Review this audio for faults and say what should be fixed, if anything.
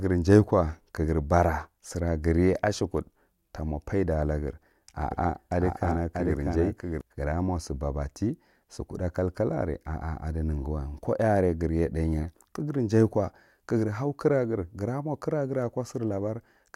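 From 5.11 to 7.01 s there's a doubled audio track: a second copy of the speech trails about 0.7 s behind, roughly 5 dB quieter, starting and stopping abruptly. Likely a slower capture path or a misaligned edit, so check routing and remove the duplicate.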